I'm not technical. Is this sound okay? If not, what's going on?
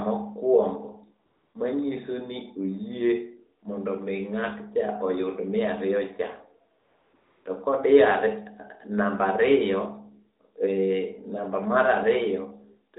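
No, not quite. You're hearing AMR comfort noise. At three short gaps, from 1.26 to 1.54 s, 6.80 to 7.14 s and 7.16 to 7.46 s, the phone decided nobody was talking and stopped sending the real sound. The receiving end filled in with a smooth, made-up hiss instead. That's why the background briefly turns flat and steady, then snaps back just before "manyiso ni oyie mondo", and goes flat again just after "mi ng'atcha oyud miariyocha". The phone's speech coding itself is only lightly coloured.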